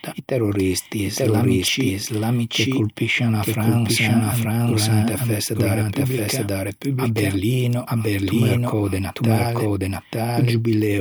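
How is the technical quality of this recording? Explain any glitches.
The recording is compromised by a doubled audio track running throughout the speech. A second full-band copy, about as loud as the original, trails roughly a second behind with no decay or room colour. It likely comes from the signal being captured again through a slower path. On a waveform and spectrogram, every phrase's envelope and harmonic pattern reappears one second later.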